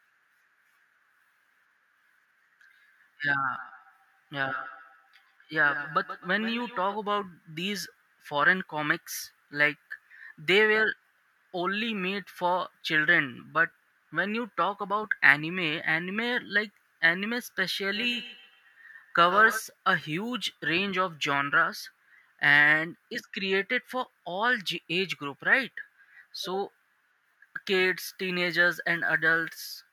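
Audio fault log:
3.52–7.02 s and 17.94–19.65 s, feedback echo between two devices. The speech returns at a steady interval of about 150 ms, peaking about 15 dB, then about 11 dB, below the voice. A second device's loudspeaker reaches this microphone, and no canceller removes that sound.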